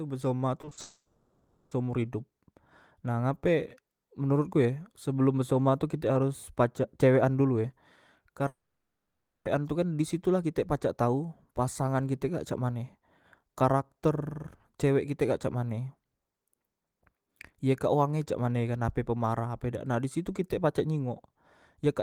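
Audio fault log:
0.61–0.79 s, repeated packet loss (robotic sound): four short holes, longest 40 ms, patched by repeating prior sound; choppy, with pieces missing, and smeared, repeated frames on a spectrogram.
0.81–1.73 s, long network dropout: about 0.9 s lost, continued as a fading buzz nearly throughout, with only 60 ms of silence; likely a network outage; shows as a flat, smeared band.
8.47–9.47 s, long network dropout: about a second lost, with a brief fading tail and then 0.91 s of silence; likely a network outage; the waveform flatlines and the spectrogram goes blank.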